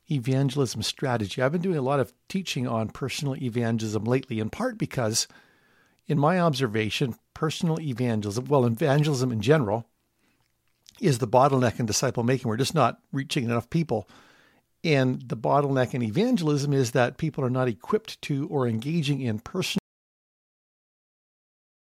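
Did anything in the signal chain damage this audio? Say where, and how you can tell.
Yes. At 19.78 s the speech cuts off mid-flow and the last 2.1 s, to the end of the clip, is an audio dropout to silence, with no room tone or noise floor. The likely cause is the input being lost at the device or converter link while recording continued. On the waveform the trace collapses abruptly to a flat line; on a spectrogram every frequency band goes uniformly black.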